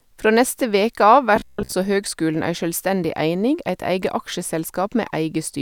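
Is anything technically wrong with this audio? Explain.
Yes. From 1.36 to 1.73 s, between "neste veke av" and "høgskulen ei sjølvstendig eining", the speech turns into robotic sound from repeated short buffers. A rigid, metallic buzz at 66.8 Hz loosely tracks the words. The likely cause is a roughly 15 ms block being replayed over most of that span while fresh audio was skipped.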